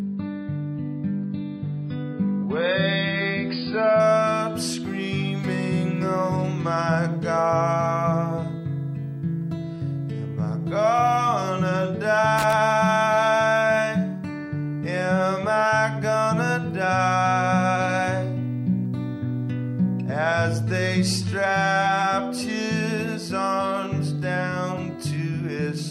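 From the start to 4.0 s, the adaptive stream begins at a low bitrate: nothing above 5 kHz, heavier codec smearing, then a sudden step to fuller sound with no gap, unlike a dropout. The jump fits a move from roughly 16 to 96 kbit/s AAC. At 12.38 to 12.53 s, a loose connector crackle gives an irregular scratchy burst of crackle, ragged rather than the evenly spaced clicks of a digital fault.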